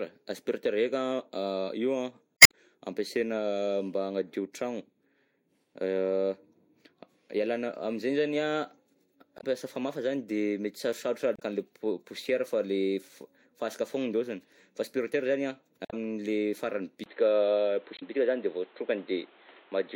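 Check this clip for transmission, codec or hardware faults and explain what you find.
Two faults are audible in this speech: repeated corruption in the compressed stream and, near the end, a drop to a poorer input.

Damaged data in a compressed stream occurs five times: 2.37–2.54 s, 9.37–9.44 s (just before "famafa zany"), 11.36–11.43 s, 15.82–15.94 s and 17.96–18.03 s. Corrupt bytes made the decoder misread or discard frames, lose sync and hunt for the next valid frame header. Each event is a brief chirp, squawk, click or short hole lasting about 70 to 170 milliseconds.

An input switched to a poorer device at 17.04 s is the likely cause of the change that lasts to the end. A 20 ms gap marks the changeover. After it, nothing is present above 4.2 kHz, so the sound turns dull and boxy. The level shifts by roughly 5 dB, and a new noise floor sits roughly 30 dB below the signal, as a narrower-band microphone or headset call profile would produce.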